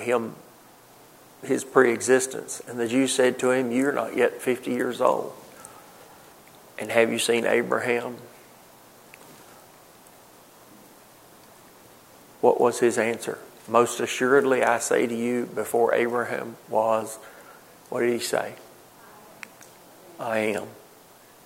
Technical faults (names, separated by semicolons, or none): none